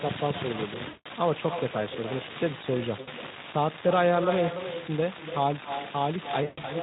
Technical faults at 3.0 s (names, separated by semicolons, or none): echo with no canceller; VoIP packet loss concealed by the speech codec